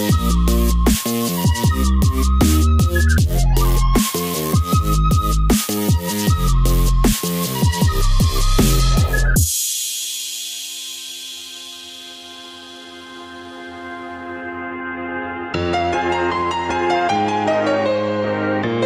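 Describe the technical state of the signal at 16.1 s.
The signal at 16.1 s is intact, with no dropout, distortion, noise burst or other fault audible there.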